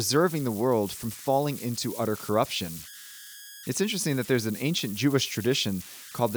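Throughout the speech, converter idle tones sit beneath the recording: the delta-sigma converter, running without dither, settles into repeating bit patterns whenever the input is small, and those patterns emerge as a whistle around 1.5 kHz, at about -16 dB relative to the signal. It is most audible in pauses, turning grainy under quiet passages. A spectrogram shows a thin, persistent horizontal line near 1.5 kHz, while the waveform's silent stretches carry low-level ripple instead of flat zero.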